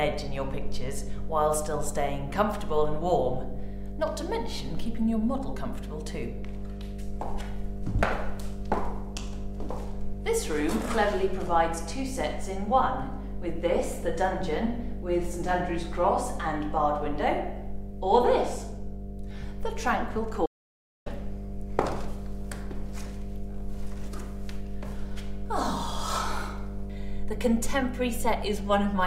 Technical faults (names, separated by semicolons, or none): mains hum; audio dropout to silence